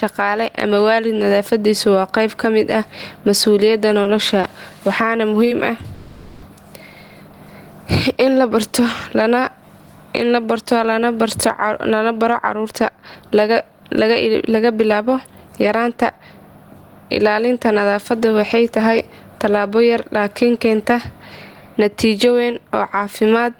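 Speech clip with several transport and level faults. Throughout, there is a gain swing of about 15 dB that flattens loud and soft passages. This gain pumping is likely from input gain set far too high, with a fast limiter or compressor clamping every peak. Between 4.03 and 5.48 s there are scattered short gaps: about three brief holes, none longer than roughly 20 ms and about 50 ms in total. Each was patched by extending the preceding sound, so nothing is lost, but small ticks and smears are audible. From 5.94 to 6.45 s a call audio freeze holds the last sound as a fading buzz or hiss for 480 ms. Packets were likely stalled in transit, emptying the jitter buffer. Playback then resumes where it stopped, with nothing missing but 480 ms of added delay. Two stretches of jitter buffer speed-up follow as the receiver trims a backlog by cutting out short pitch-period slices. From 11.88 to 16.58 s, speech runs at 108% speed with roughly 400 ms removed. 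From 18.13 to 18.80 s, just before "talabo yar", it runs at 109% with about 70 ms removed. Pitch stays unchanged in both, but the delivery sounds hurried.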